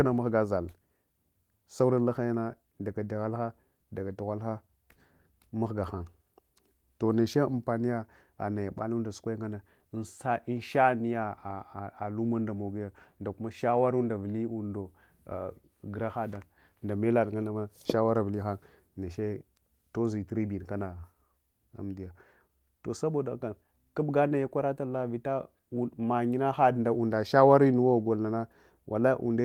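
No faults: the speech runs through Opus voice compression at 24 kbps in hybrid mode at full bandwidth, with light coding damage and content extending to about 20.1 kHz.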